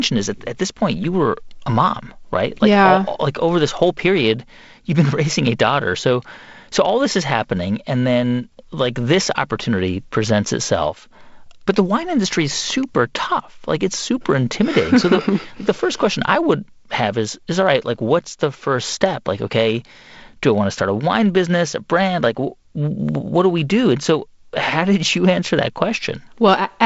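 There are no technical faults to describe in this speech, which carries the light upper-band hiss and roughly 7.7 kHz ceiling of G.722 wideband telephone coding.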